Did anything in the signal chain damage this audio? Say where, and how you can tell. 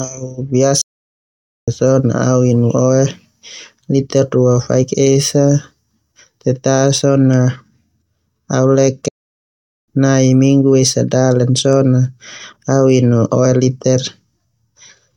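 Yes. The damage is at playback: two playback stalls. The speech falls silent from 0.81 to 1.68 s, resuming at "sona au", and again from 9.08 to 9.88 s. The gaps last about 0.86 s and 0.79 s. The player likely ran out of data, then recovered.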